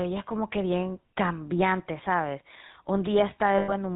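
The whole clip has the GSM full-rate codec's gravelly buzz: regular-pulse excitation and nothing above 4 kHz, roughness that fits the old 13 kbps rate. Around 3.58 to 3.73 s, lost GSM frames, roughly 100 ms' worth, get patched by repeating the last good frame, so the speech smears into a metallic ring.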